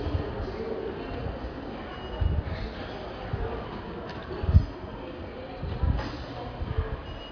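A short recording of sounds with nothing technically wrong to point to anywhere in it.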